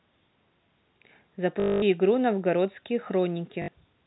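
From 1.6 to 1.82 s, and from 3.62 to 3.68 s, the speech stutters robotically. This is packet loss with the last packet repeated. One short chunk was replayed until audio resumed. The longer run buzzes near 50 Hz, which fits 20 ms packets.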